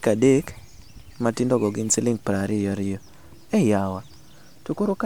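Nothing in the speech signal points to a technical fault at any moment: level, timing and continuity hold steady throughout.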